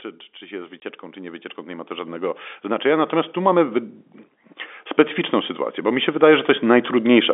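From 0.39 to 3.85 s the automatic gain rises: the level control decides the speech is too quiet and turns it up by about 13 dB, so the voice and the background swell together instead of holding steady. Later, from 5.75 to 7.29 s, it rises again, this time by about 6 dB, for the same slow, shared lift.

At 0.80 s, inside that first climb, there's a packet loss filled with silence. One 20 ms packet goes missing and the receiver plays nothing for that span, so you get a short hard-edged dropout, cut out of the narrow telephone-band audio.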